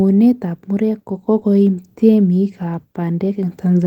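At about 1.39 s, right after "ab murek ko", there's a short concealed packet loss running to about 1.43 s. Around 20 ms of the speech didn't get to the decoder in time, so the receiver covered the gap by carrying the preceding sound forward and then blending back into the real signal. You hear it as a quick smear or wobble, just a brief blip.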